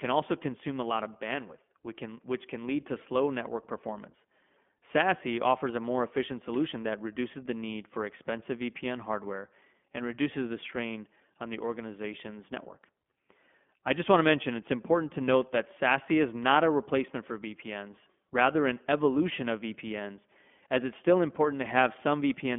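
Throughout, iLBC codec coding leaves nothing above 3.6 kHz and a rough, synthetic edge on the speech, whose frame-by-frame roughness, fitting 20 ms frames at 15.2 kbps, sets it apart from clean band-limiting.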